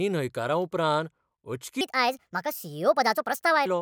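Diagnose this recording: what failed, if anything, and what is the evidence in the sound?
Wrong sample rate at the playback stage: from 1.81 to 3.66 s the speech runs 1.38 times fast and about 5.6 semitones high, which fits 32 kHz audio played at 44.1 kHz without conversion.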